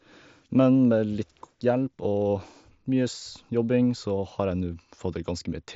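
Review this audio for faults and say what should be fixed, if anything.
Nothing here needs fixing; it's speech carried over a Bluetooth headset link using the mSBC codec, so the top end naturally stops at about 7.7 kHz, and that's just how that path sounds.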